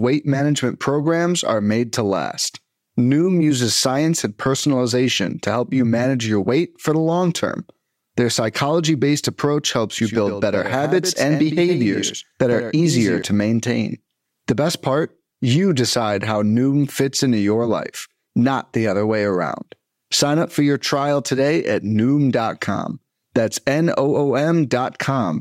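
A speech recording with a doubled audio track from 9.98 s to 13.22 s. A second full-band copy trails the original by about a tenth of a second, roughly 10 dB quieter. It has no decay or room colour, and it starts and stops abruptly. The likely cause is the audio being captured twice, once through a slower path.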